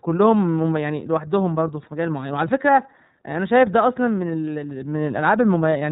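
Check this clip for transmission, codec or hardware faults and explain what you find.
The speech has one codec fault, audible throughout: iLBC coding. Nothing passes above 4 kHz, so a spectrogram shows a hard ceiling there, and the damage is plainly audible: voicing sounds a little rough and synthetic, consistent with 30 ms frames coded independently.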